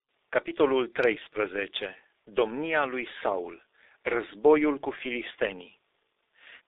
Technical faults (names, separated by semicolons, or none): G.723.1 codec